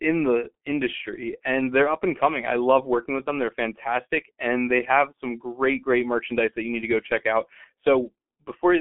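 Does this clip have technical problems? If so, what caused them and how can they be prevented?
Yes. The speech went through a G.723.1 codec throughout, with long frames at a rate fitting about 6.3 kbit/s. Nothing above 3.7 kHz survives, so the voice sounds muffled, hoarse and smeared. Prevent this by carrying the call with a wideband codec at a higher bitrate.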